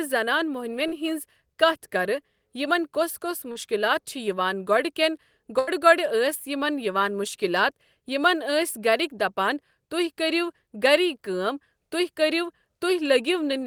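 Two short concealed packet losses come first. At 0.87 to 0.95 s, and again at 3.52 to 3.58 s just after "کۄس کۄس", about 40 ms of speech failed to reach the decoder in time. Each time the receiver bridged the gap by extending the preceding sound for roughly 35 to 45 ms and then crossfading back into the real audio. The result is a brief smear or wobble in the speech.

At 5.59 to 5.70 s, just after "گۄڑٕ کٮ۪ن", comes a burst of packet loss. About 80 ms of consecutive audio was lost or arrived too late to play. The receiver filled roughly the same length by continuing the last sound while steadily lowering its level, which produces a held buzz or a fading hiss. When the speech resumes, everything in that stretch is missing.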